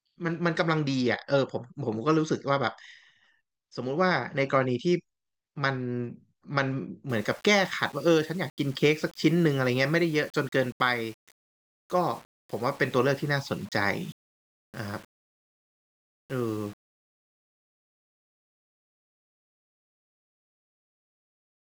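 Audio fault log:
7.10 to 21.66 s, low bit depth without dither: from 7.10 s to the end, the speech is carried on a coarse amplitude ladder of about 7 bits, each sample likely rounded to the nearest step with no dither to break up the error. Because that rounding error tracks the waveform, it sounds like grainy distortion that shifts with the speech rather than a steady hiss, sitting roughly 30 dB below the signal. Quiet syllables and decays turn rough, and the lowest-level passages sputter between adjacent steps or drop out entirely.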